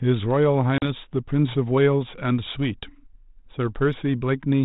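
Speech with packet loss on an ADPCM call: a hard-edged 40 ms silent hole at 0.78 to 0.85 s, about two packets. Unlike a plain dropout, the decoder's predictor briefly mistracks after the hole.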